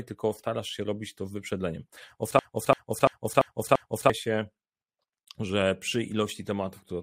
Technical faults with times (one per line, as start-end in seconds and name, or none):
2.39-4.10 system hang loop